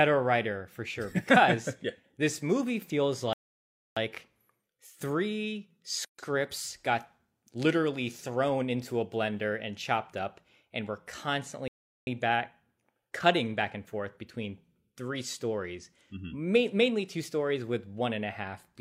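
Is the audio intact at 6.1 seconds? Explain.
No, a gap at a join of encoded pieces runs from 6.05 to 6.19 s: untrimmed encoder delay and padding leave a 138 ms gap, cutting the speech before it resumes.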